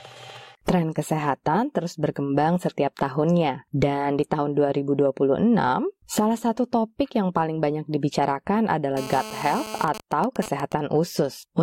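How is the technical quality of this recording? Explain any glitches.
Two stretches of radio interference from a nearby 2G phone mar the recording.

From 8.97 to 9.85 s, GSM phone buzz: a phone in a call pulses at 217 Hz, and the circuit rectifies it into a raspy buzz about 12 dB below the signal. A spectrogram shows evenly spaced harmonic lines; the waveform shows regular pulse trains.

From 9.88 to 10.72 s, GSM signalling bursts: the phone's user falls silent mid-call, so only sparse rectified bursts remain, heard as even ticks with a longer buzz twice a second, roughly 10 dB down. They appear as broken vertical clusters on a spectrogram.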